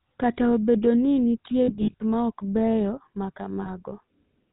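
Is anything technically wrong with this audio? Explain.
Yes. The speech has two related faults: constant GSM full-rate codec damage and two bursts of lost GSM frames.

The GSM full-rate codec affects the whole clip, and its damage is plainly audible. It models the vocal tract and drives it with a sparse, regularly spaced pulse excitation, which fits the 13 kbps full-rate coder. Everything above 4 kHz is cut, but the buzzy, gravelly grain is what distinguishes it from simple band-limiting or telephone filtering, which would only sound muffled.

Lost GSM frames occur from 1.64 to 2.01 s, after "obedo ni nitie" and just before "ma ok beyo ma". About 240 ms of audio is missing, scattered over 360 ms, with the longest gap about 70 ms. That fits roughly a dozen 20 ms frames. The decoder repeats the last good frame at a falling level, so the sound freezes into a rough, metallic ring instead of dropping to silence as a plain dropout would.

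A second, shorter loss occurs at 3.62 to 3.70 s, after "ma ok beyo ma". About 40 ms is missing and heard as a brief ringing smear.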